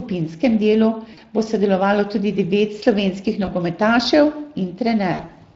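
You're hearing a speech recording that's been squeezed through the Speex codec the whole way, and it's plainly audible: the voice has that hoarse, noisy CELP grain where the excitation just doesn't get enough bits, which fits a bitrate of around 20 kbps. On top of that there's VoIP packet loss concealed by the speech codec at three spots. From 1.13 to 1.22 s about 40 ms goes missing, which fits two lost 20 ms frames. At 3.45 to 3.49 s a single frame's worth drops out. The worst patch runs from 5.13 to 5.33 s, where roughly 120 ms is lost in bits scattered across 160 ms, the longest gap about 60 ms. Each time the decoder keeps extending the last pitch and filter at falling gain, so you get a smeared, fading buzzy tone or coloured noise, and the voice stays weak or distorted briefly after real packets resume.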